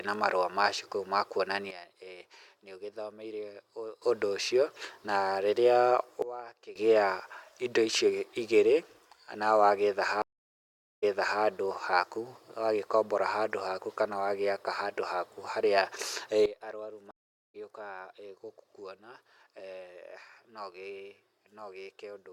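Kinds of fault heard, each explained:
Sudden gain jump: The level drops in a single step, and the speech and the background noise fall together. It happens at 1.71 s for about 2.3 s at about -14 dB, and at 6.22 s for about half a second at about -18 dB. It happens again at 16.46 s through to the end at about -15 dB. The likely cause is a digital gain change applied without a ramp.
Stream reconnect: The connection breaks, the audio goes silent, and a fresh decoder picks up mid-stream. At 10.22 s there is 0.81 s of silence. The speech then resumes 0.4 s earlier than where it stopped, so a short stretch is heard twice. At 17.11 s a 0.43 s gap follows. The speech returns about 0.3 s later, so a little is skipped.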